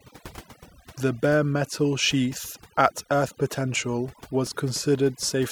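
Overdone noise removal runs the whole way through: the denoiser was pushed too hard, carving out quiet bands, so the background twinkles.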